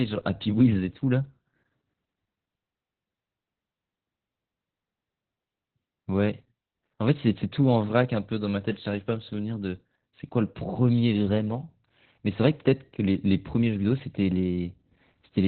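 Throughout the speech, heavy Opus voice compression is at work: the sound points to the SILK coder running at a very low rate, around 8 kbps, narrowed to a 4 kHz band with coarsely coded excitation. Voices come out muffled, hoarse and slightly robotic.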